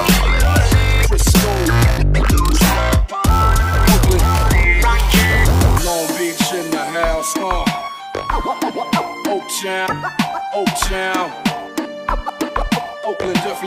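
No technical faults can be heard anywhere in this audio.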